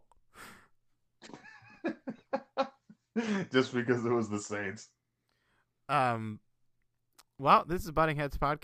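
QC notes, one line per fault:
No faults found in the speech recording. Nothing needs to be flagged.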